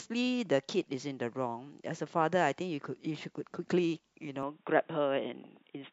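At 4.43 s the input likely switched to a poorer device. Through to the end, the speech turns dull with nothing above 3.8 kHz, and faint new noise appears.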